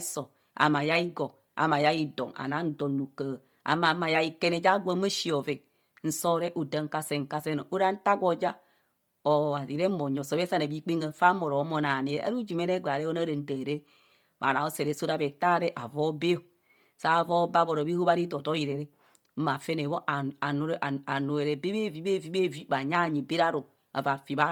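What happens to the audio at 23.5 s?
At 23.5 s the speech carries the same heavy coding damage heard through the whole clip, likely from Bluetooth LC3 compression. Much of the upper spectrum is replaced with filled-in noise, giving a breathy, grainy edge. The band reaches 20.2 kHz, and the damage fits roughly 32 kbps.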